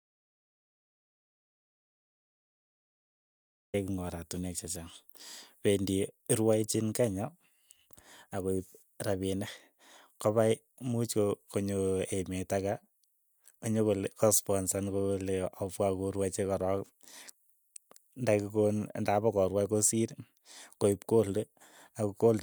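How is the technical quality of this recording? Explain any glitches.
There's one clear glitch: an audio dropout to silence right at the top. From the very start the track is dead, and the speech doesn't come in until about 3.74 s. It's silence, with no room tone or hiss at all, so the input was most likely cut off upstream, by a disconnected mic, a dropped link or a mute left on, while the recorder kept writing silence. Whatever happened in those first few seconds is simply gone.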